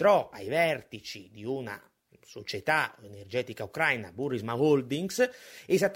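Nothing stood out as a technical problem on listening to this speech recording.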